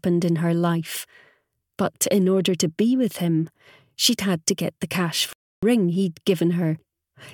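At 5.33 s the sound halts for about 0.3 s, a playback stall, likely the player running dry.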